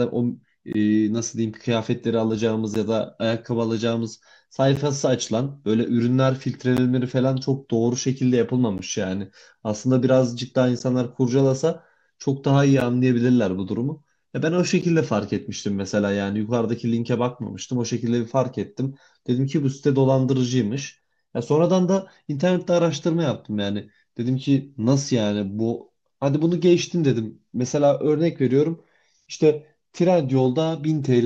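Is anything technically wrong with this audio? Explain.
Yes. There's a recurring gap at a join of encoded pieces, hitting at 0.73, 2.75, 4.76, 6.77, 8.78, 10.79, 12.80 and 14.81 s, so every 2 s or so. The speech drops out briefly, about 19 ms the first time and about 11 ms after that, then resumes right where it stopped. It sounds like the audio was encoded in chunks and joined without trimming the encoder's start delay and end padding, so a short silence with smeared edges sits at each seam.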